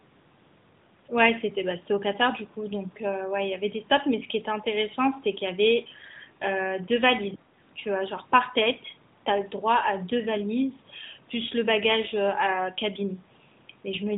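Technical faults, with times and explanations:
7.36–7.52 s, speech suppressed in double talk: speech sinks roughly 25 dB for about 150 ms, likely echo-canceller ducking, a level dip rather than a packet-loss gap.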